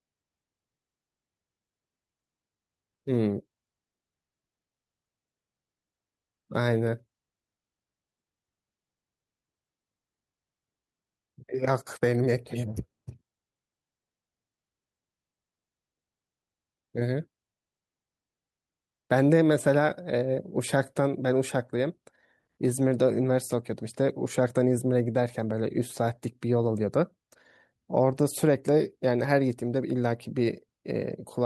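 No technical faults can be heard in this speech recording.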